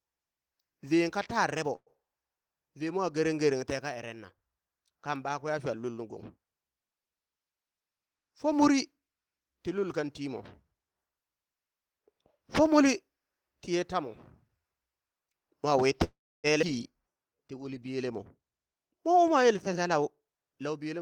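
Speech with a few network-timing problems. There's a call audio freeze at 1.75–1.90 s and a longer one at 16.04–16.47 s, where the sound stretches into a fading buzz or hiss and then drops to silence for roughly 50 ms and 300 ms before resuming intact. That's likely the jitter buffer running dry while packets were held up. Right after "mwa wi", at about 16.62 s, there's a skip ahead that jumps past around a fifth of a second of speech with barely a seam. At 17.03–17.44 s, just before "ti uli", a jitter buffer slow-down drags things to 88% speed by repeating pitch periods, adding 55 ms at the same pitch. Finally, two jitter buffer speed-ups trim pitch periods to shed roughly 100 ms each. The first runs at 115% over 18.18–18.77 s, between "ti uli" and "mwa u mwa yele", and the second runs at 113% from 20.24 s to the end, so both stretches sound hurried.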